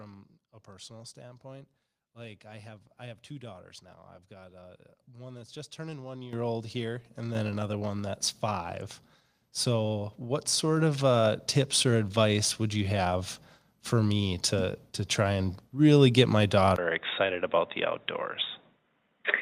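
Microphone volume stepped up at 6.33 s, just after "that's just turning one", by about 11 dB, and again at 7.35 s, after "old here and", by about 5 dB. Each time the input gain was raised in a single step, so voice and background noise jump louder together instantly.

Input switched to a poorer device at 16.76 s, after "really get my", likely a change to another microphone or headset. After a 20 ms gap the sound turns dull, sits a few decibels quieter, and carries a faint new noise floor through to the end.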